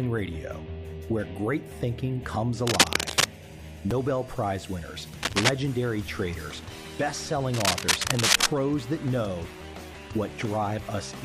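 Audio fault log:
2.67–3.31 s, 5.23–5.49 s, 7.54–8.46 s: cable scratch noise, dense uneven rustling about 5 dB above the sound, likely from a worn cable or connector being moved; far longer and rougher than a click.
3.91 s, 6.08 s: repeated buffer, a 5.8 ms piece played twice, which fits a 256-sample buffer; heard as a click or brief buzz rather than a stretch of noise.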